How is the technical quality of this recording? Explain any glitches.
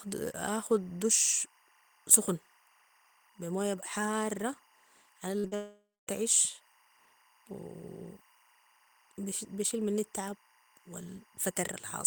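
The recording is compromised by a constant interference tone and a cluster of gaps around the middle of the clip.

Timecode bleed runs throughout. Faint linear timecode, roughly 35 dB below the speech, alternates near 1 and 2 kHz at a rate that fits 23.976 fps code. It is heard as a chirping warble and appears as thin, steady horizontal bands on a spectrogram.

Short concealed packet loss occurs at 5.39–5.46 s and again at 5.48–5.53 s. In each case about 40 ms never reached the decoder, which extended the preceding sound. This is heard as a brief smear and shows as smooth, repeated texture with no new detail.

A long network dropout likely explains 5.55–6.09 s. The last sound is prolonged and fades, and then leaves about a quarter second of silence. The waveform decays to a flat line before the speech resumes, with roughly half a second of content lost.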